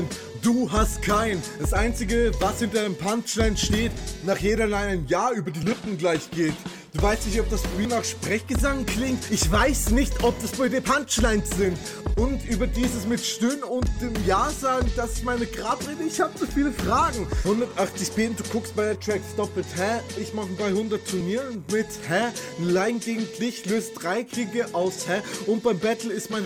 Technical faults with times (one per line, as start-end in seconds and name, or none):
5.63 dropped buffer (overrun)
7.85 dropped buffer (overrun)
21.21 dropped buffer (overrun)